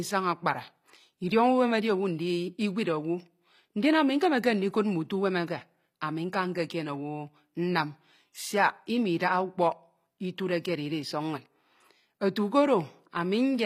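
Speech, likely passed through HE-AAC compression at a low bitrate near 24 kbps, so the treble is rebuilt from copied lower bands, leaving s sounds gritty and metallic throughout.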